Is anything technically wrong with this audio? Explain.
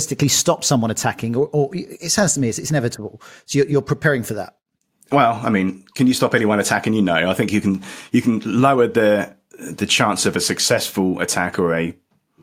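No, nothing in this speech recording indicates a technical fault.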